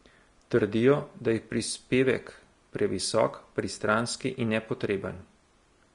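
Vorbis compression runs through the whole speech clip: nothing survives above 10.6 kHz, and the remaining treble sounds hissy and grainy, with roughened tones and smeared consonant attacks. The likely cause is low-quality Vorbis encoding, consistent with a bitrate near 36 kbps, which quantises high-frequency detail into noise.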